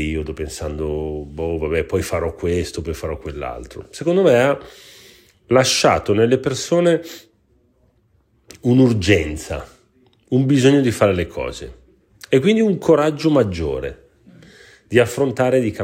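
Nothing technical goes wrong anywhere in this bit of speech, so there's really nothing to point out.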